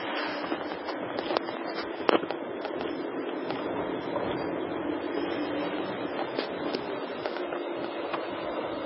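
Heavy MP3 compression runs throughout, likely from a very low bitrate near 16 kbps. Nothing remains above 5.6 kHz. Starved coefficients flicker, giving a watery swirl and smeared attacks.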